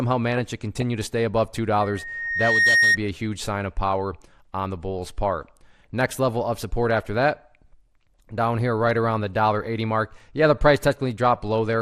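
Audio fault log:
Throughout: MP2 compression. A likely low-rate MPEG Layer II encode, which fits something near 80 kbps, starves the 32 sub-bands of bits, so the upper bands switch off and flicker. The surviving bands are coarsely quantised, leaving the sound dull, granular and gurgling.
1.81 to 2.98 s: loudspeaker feedback squeal. A microphone picks up its own loudspeaker, and at 1.9 kHz the loop gain passes one. That tone swells over roughly a second into a squeal about 5 dB above the rest of the sound, then stops.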